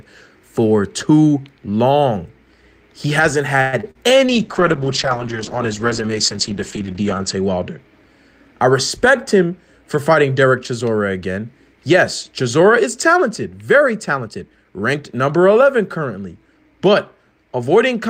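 A call audio freeze in this speech recording at 3.61 to 3.75 s is heard as the sound before it being stretched into a fading buzz-like tail for about 113 ms. The likely cause is packets held up in transit until the jitter buffer ran dry, so the receiver extended the last sound. When they arrived the speech resumed where it stopped, adding about 113 ms of delay without losing any audio. Short concealed packet loss follows at 3.81 to 3.85 s and 3.91 to 3.97 s, as two brief smears or wobbles. Roughly 20 ms and then 40 ms of audio never reached the decoder, so the receiver continued the preceding sound to bridge each hole and blended back into the real signal, which can blur or swallow a short consonant. A call bitrate drop runs from 4.27 to 7.85 s. The encoder was pushed from 40 kbps down to 9 kbps, sitting at the lowest rate for about 3.1 s, and the audio bandwidth shrank from 20 kHz to 8 kHz. 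The speech turns muffled and coarse, losing its upper sibilance and air, until the rate climbs back. A jitter buffer speed-up at 8.96 to 9.51 s makes the speech run about 6% fast with its pitch unchanged. The buffer held more audio than its target, so the receiver trimmed small pitch-period slices, about 40 ms in total, to pull latency down. A second, stronger speed-up at 14.19 to 14.64 s runs at 115%, removing roughly 70 ms, and sounds noticeably hurried.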